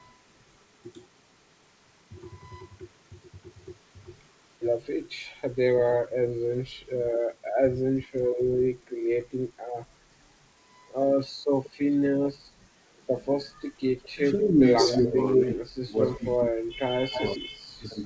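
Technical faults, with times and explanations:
5.92 to 8.25 s, speech suppressed in double talk: the voice sags in patches totalling roughly 0.7 s, dropping up to about 20 dB. It's most likely the echo canceller mistaking the talker for loudspeaker echo while the far end spoke, so it turned everything down.
11.64 to 11.7 s, echo leak: a faint echo blip about 20 dB under the voice, arriving 189 ms late. It's likely leftover loudspeaker pickup the canceller missed.
14.03 to 14.9 s, echo leak: a strong delayed copy, 191 ms behind and about as loud as the speech itself.
14.13 to 18.0 s, speech suppressed in double talk: a heavier stretch, about 3 s of ducking and dropouts reaching roughly 35 dB down, likely as the canceller clamps the talker along with the echo.
17.15 to 18.05 s, echo leak: another 193 ms echo, about 10 dB below the voice.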